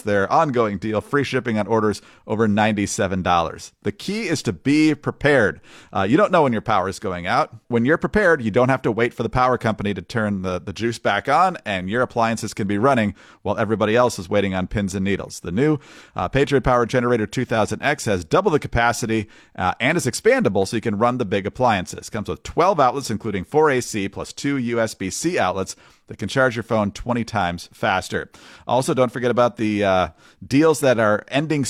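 No technical faults are audible anywhere in this recording.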